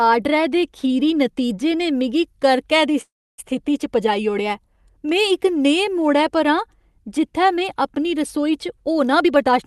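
At 3.01 s the speech stops short in a call audio freeze lasting until 3.40 s. The receiver's jitter buffer ran empty, most likely because packets were held up in transit. The last sound carries on briefly as a fading buzz, then drops to silence for about 290 ms. When audio resumes it picks up where it left off. Nothing is lost, but a gap of about 370 ms has been inserted, and the delay grows by that much.

From 9.12 s to the end, at 9.67 s, a jitter buffer speed-up sets in. The buffer held more audio than its target, so the receiver trimmed many short pitch-period slices in quick succession, about a fifth of a second in all. The speech runs at roughly 144% of normal speed with unchanged pitch and sounds rushed. Throughout, the Opus call path limits the top end to 12 kHz, which fits a bitrate near 32 kbps.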